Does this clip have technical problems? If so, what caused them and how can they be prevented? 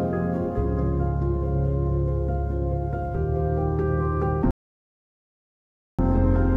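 Yes. At 4.51 s the sound drops abruptly to silence and stays silent until 5.99 s, then picks up exactly where it left off, with nothing skipped. This is a rebuffering stall: the player used up all the audio it had downloaded and had to pause until more data arrived, adding about 1.48 s of dead air without losing any content. Buffering more audio before playback starts, or letting the bitrate drop when the connection slows, prevents it.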